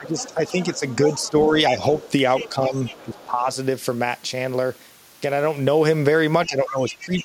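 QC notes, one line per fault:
0.00–1.82 s, speech suppressed in double talk: the echo canceller likely mistook both talkers for echo and ducked them, so the speech dips by about 10 dB in patches totalling roughly 0.7 s.
0.06–1.30 s, other side's voice leaking through: residual loudspeaker echo was likely left in the microphone signal, so a faint second voice sits about 20 dB under the speech.
1.99–2.49 s, other side's voice leaking through: the canceller likely failed to remove far-end echo here, leaving a second voice more audible, about 15 dB below the speech.
2.44–3.49 s, speech suppressed in double talk: overlapping talk likely triggered suppression of the near talker, so the speech is pulled down by about 10 dB for roughly 0.7 s in pieces.
2.85–3.25 s, other side's voice leaking through: incomplete echo cancellation likely let the far end back in, heard as a faint second voice about 20 dB under the speech.
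6.46 s to the end, speech suppressed in double talk: the canceller likely clamped down during simultaneous talk, so the speech drops by about 15 dB across roughly half a second.
6.68–7.22 s, other side's voice leaking through: leftover loudspeaker echo was likely not subtracted, so the other side's voice comes through about 20 dB below the speech.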